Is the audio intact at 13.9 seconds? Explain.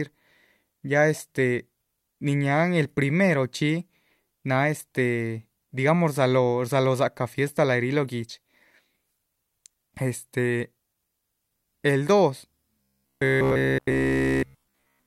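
No. From 12.81 to 15.06 s the speech is a rigid 66.8 Hz metallic buzz, robotic sound from repeated short buffers, likely a 15 ms chunk looped throughout.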